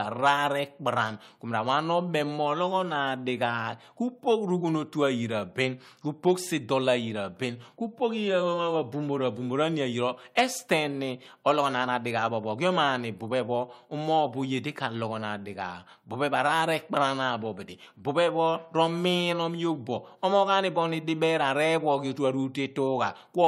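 Speech recording, with no audible technical faults to report.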